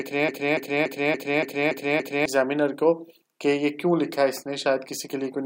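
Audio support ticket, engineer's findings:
Broken-record loop, 0.00–2.26 s, already under way when the clip opens. A 0.29 s fragment repeats exactly, back to back, seven times, then normal playback resumes. Likely cause: the player, encoder or stream stalled and kept resending its last held fragment. Audio that belonged in that span is lost, not delayed.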